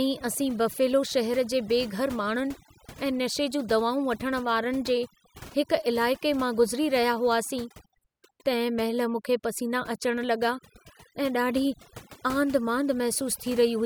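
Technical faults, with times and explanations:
Throughout: overdone noise removal. Noise reduction set far too aggressively shuts off individual frequency bands whenever they sink toward the noise estimate, taking quiet speech detail with them. The background drops and breaks up, dotted with twinkling specks. On a spectrogram this shows as black gaps between isolated bright speckles and ragged, hollowed-out speech energy.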